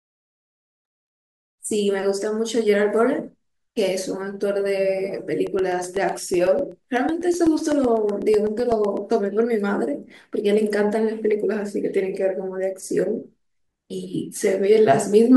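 It's a speech recording, and from about 5.47 s to 9.10 s it picks up a steady run of ticks: periodic USB or driver dropouts. Every 0.125 s, so eight times a second, roughly a millisecond of audio gets swapped for silence, around thirty gaps in all. They land like clockwork, so something in the background is stalling the USB bus or the audio driver on a fixed schedule and the stream briefly starves each time.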